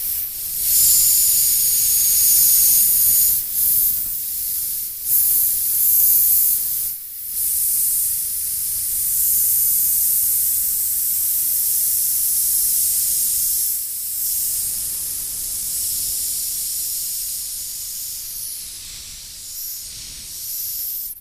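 No technical faults can be heard anywhere in the audio, and the signal keeps an intact character throughout.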